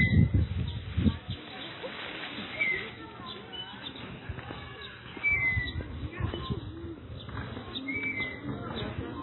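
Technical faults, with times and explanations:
Throughout, MP3 compression, likely: the audio has nothing above 4 kHz, a flat ceiling that shows on a spectrogram as a hard horizontal edge with empty space above it. Below that edge, weak components flicker on and off from frame to frame, leaving patchy holes, so the sound turns watery and swirly and sharp attacks smear. The damage is heavy, which fits an encoder starved at a very low bitrate around 16 kbps.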